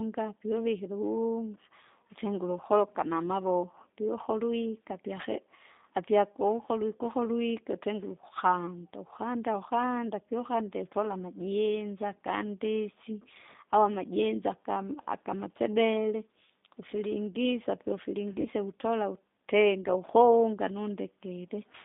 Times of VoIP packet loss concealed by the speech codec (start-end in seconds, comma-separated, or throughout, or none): 18.41-18.48